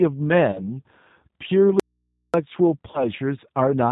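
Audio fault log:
Throughout: G.729 codec. The speech has a plainly rough, slightly synthetic quality. The sound points to a G.729-type coder at about 8 kbit/s. That kind of coder rebuilds each 10 ms frame from a vocal tract filter, a pitch predictor and a handful of pulses, so fine waveform detail is replaced by a modelled approximation. Nothing above 4 kHz comes through, which leaves the top end dull and the sibilants blunted.
0.52 to 0.77 s and 2.91 to 3.06 s: VoIP packet loss concealed by the speech codec. Each event starts with a short loss of about 30 ms, which fits a single missing packet. The decoder fills the hole by extending its last pitch and filter settings with falling gain, so the sound smears into a brief, fading stretch of synthetic sound. Because each frame is predicted from the one before, the speech stays weakened and distorted for roughly 220 ms and 120 ms respectively before recovering.
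1.80 to 2.34 s: audio dropout to a faint residue. The speech cuts off abruptly and returns just as abruptly about 0.54 s later, with no fade at either edge. During the gap only a low mains hum remains, around 55 dB below the speech level. That points to the signal source dropping out while the downstream path stayed live, likely from an open or momentarily disconnected input picking up hum.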